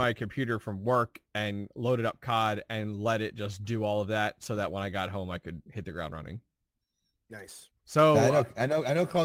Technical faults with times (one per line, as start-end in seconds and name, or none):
0.00-9.25 clock drift between sender and receiver
0.25-9.18 repeated timing corrections